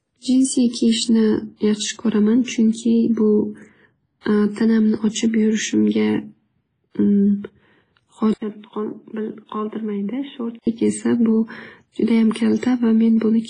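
From start to finish the speech carries heavy codec damage, most likely WMA compression at a low rate, which fits a 24 kbps encode. Nothing remains above 10.4 kHz. The transform spreads quantisation noise across long blocks, so the speech rings and sounds washy, and a hiss rises and falls with the signal. At this rate weak spectral lines are zeroed out, which thins the texture further.

At 8.34 s the input switched to a poorer device, likely another microphone or a headset's call profile. The change opens with an 80 ms silence. The band then closes to nothing above 3.8 kHz, so the speech turns dull and boxy. The level falls by around 10 dB, and a new noise floor appears roughly 45 dB below the signal. At 10.67 s the original input returns and the wider band comes back.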